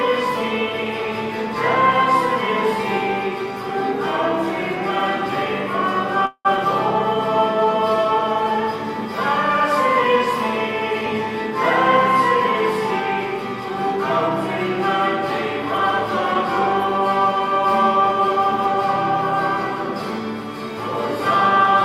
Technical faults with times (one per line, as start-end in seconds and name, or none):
6.25-6.47 call audio freeze
6.57-6.59 skip ahead
7.18-8.69 jitter buffer slow-down
16.26-19.13 jitter buffer speed-up
16.33-16.36 short concealed packet loss